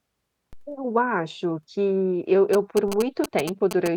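At 0.53 s a DC step of about -33 dBFS shifts the waveform's zero line. It gives a low thump, then slowly decays away. GSM signalling bursts begin at 2.53 s, just after "acho que eu", and run to 3.88 s. A nearby 2G phone's radio bursts are rectified into a galloping 217 Hz buzz, only slightly below the speech. A second identical DC step thumps at 2.88 s.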